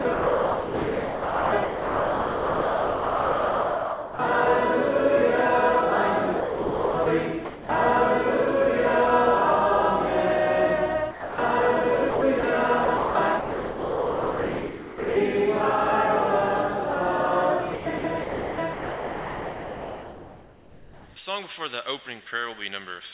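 From 0.02 to 4.19 s the sound keeps cutting in and out. That's likely sound chopped by the voice detector: the sender kept toggling transmission, and comfort noise covered nearly 4 s of that stretch. It happens again from 6.40 to 7.06 s.

At 7.45 to 7.69 s the sound briefly gives way to steady noise, likely sound dropped by the voice detector, which mistook a quiet passage for background and stopped sending. The same short dropout recurs at 11.11 to 11.38 s, lasting about a quarter second.

The choppy switching returns from 12.10 to 12.43 s, 12.85 to 15.16 s and 17.74 to 21.16 s, with comfort noise filling about 2 s and 3 s of the last two. Everything sits under the 4 kHz ceiling of the G.711 call path.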